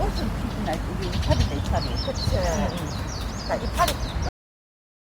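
At 4.29 s the audio has a cut-off end: the final buffers were never written, so the sound stops mid-event and drops straight to digital silence with no decay. The waveform flatlines abruptly, and the spectrogram shows a hard vertical edge followed by blank space.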